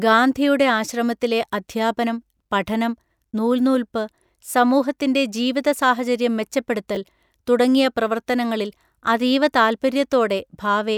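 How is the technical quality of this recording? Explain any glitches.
The recording has one glitch, a case of chunks out of order at 6.95 to 6.97 s, just before "തുടങ്ങിയ പ്രവർത്തനങ്ങളിൽ അതീവ". A 10 ms chunk was delivered one chunk late and played after its successor. The swapped order creates three hard joins, heard as a brief jumbled flicker.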